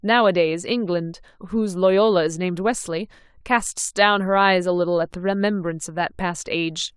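No technical faults can be heard anywhere in the speech recording. Nothing in the sound points to trouble with how it was captured, processed or delivered.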